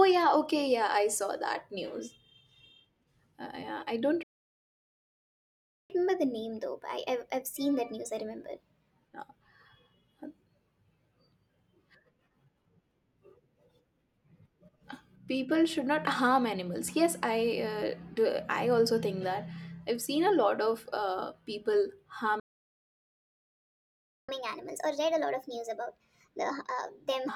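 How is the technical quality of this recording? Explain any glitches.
The recording has two playback stalls, each followed by a burst of catch-up at higher speed.

Playback stall, 4.23 to 5.90 s and 22.40 to 24.29 s: the speech falls silent for about 1.7 s and then 1.9 s, most likely because the player's buffer ran dry.

Catch-up at higher speed, 5.90 to 8.90 s and 24.29 to 27.29 s: the backlog is resampled at 1.15 and then 1.25 times normal speed, lifting pitch about two and then four semitones. Because it follows a stall and then settles back, it is distinct from a constant speed error.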